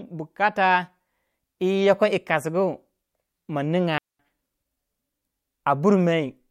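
A digital wireless dropout at 3.98 to 4.19 s: the receiver lost too much data and muted for about 214 ms, leaving a clean near-silent gap without noise bursts.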